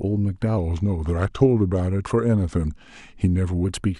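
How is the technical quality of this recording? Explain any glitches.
There's one real glitch. From 0.57 to 3.65 s, wrong sample rate: playback runs at 0.919 speed, about 1.5 semitones low, so the speech drags and deepens, which fits 48 kHz audio played at 44.1 kHz.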